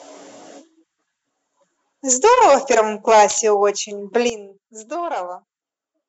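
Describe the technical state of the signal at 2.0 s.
At 2.0 s the speech signal is intact, with no audible fault at that moment.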